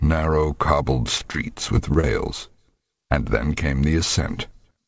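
Audio carried over a call path, with nothing above 8 kHz, which fits a G.722 wideband codec, shows repeated packet loss (robotic sound) from 1.18 to 2.05 s. Six short holes, the longest about 22 ms, are patched by continuing the previous sound, giving a choppy texture. On a spectrogram these appear as brief, smeared, steady-looking slices. On the waveform they show up as small repeated cycles.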